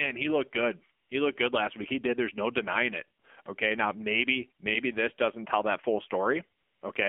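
From start to finish the voice sounds thin, buzzy and synthetic, confined to a band of roughly 250 Hz to 3.4 kHz with nothing above. This is the AMR narrowband mobile codec. Speech is sampled at 8 kHz and rebuilt from a vocal-tract model excited by a few pulses per subframe. The plainly audible damage fits a low mode around 7.4 kbps, where too few pulses are coded to keep the voice natural.

At 1.04 to 1.10 s, just after "he looked good", the real background briefly gives way to a smooth, even hiss. The same happens at 3.20 to 3.24 s and again at 3.42 to 3.46 s, both after "no denying it", and for longer at 6.60 to 6.82 s. This is AMR comfort noise. The sender judged these moments silent and stopped sending speech frames. The receiver then filled each gap with synthetic noise built from a coarse level and spectrum, so the texture switches in and out.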